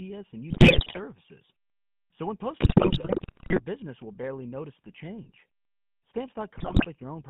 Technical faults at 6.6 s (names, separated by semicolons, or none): GSM full-rate codec; GSM bit errors